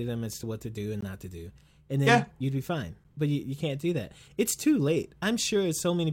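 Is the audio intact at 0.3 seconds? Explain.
Yes, at 0.3 seconds the speech plays through intact, with no dropout, click, distortion or other fault to be heard at that moment.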